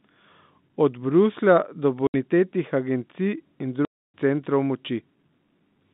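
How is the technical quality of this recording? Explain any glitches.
Two dropouts chop up the speech; it's coming through a phone line, G.711, with the usual narrow band of roughly 150 Hz to 3.7 kHz.

Packet loss filled with silence hits at 2.07 to 2.14 s (70 ms) and 3.85 to 4.14 s (290 ms). Lost packets were replaced with dead air, and both gaps are whole multiples of 10 ms, which fits 10 ms packets. You hear abrupt holes with hard edges, and the second one is long enough to swallow a chunk of speech.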